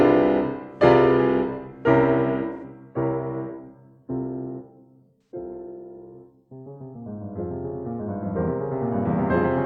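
At 2.52 to 2.63 s and again at 5.23 to 5.31 s the music briefly turns smeared and phasey. This is AAC frame loss with concealment. About 85 ms of data goes missing each time, which fits two lost frames, and the decoder papers over the gap by reusing the last good spectrum with randomised detail. On a spectrogram each patch appears as a blurred, texture-less band where the fine harmonic lines lose definition. The waveform shows an unnaturally even stretch there.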